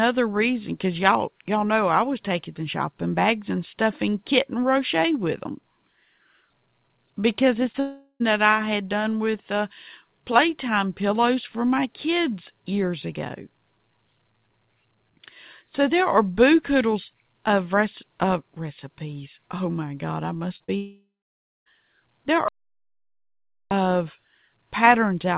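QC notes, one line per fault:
7.72–7.76 s, short concealed packet loss: roughly 20 ms of the incoming stream failed to reach the decoder in time, so the receiver stretched the preceding sound across the gap and then crossfaded back into the real signal. The patch is brief enough to pass as a brief smear or wobble in the band-limited call audio, which carries nothing above 4 kHz.
7.80–8.22 s, long network dropout: about 400 ms of audio likely never arrived from the network. The receiver first extended the last sound as a decaying buzzy or hissy tail, but concealment cannot hold that long, so it collapses into about 70 ms of near silence before the stream resumes. The stretch that went missing is simply absent.
20.56–20.62 s and 20.64–20.70 s, short concealed packet loss: two roughly 40 ms gaps arrive back to back, each filled by continuing the preceding sound and blending back in. Together they give a wobbly, smeared patch in place of a clean transition. 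This cluster leads straight into the longer outage that follows.
20.76–21.68 s, long network dropout: about 900 ms of audio likely failed to get through. Concealment fills the opening moments with a fading synthetic continuation of the last sound. It then gives up, leaving roughly 580 ms of silence or low steady noise before real audio returns partway along, with nothing from the missing interval.
22.48–23.71 s, audio dropout to silence: the input was cut off for about 1.23 s, likely through a lost connection or a stray mute upstream, and silence was written in its place. The sound stops abruptly and restarts mid-flow. The gap is silent with no background or room tone, unlike the concealment tails above, and everything in that span is lost.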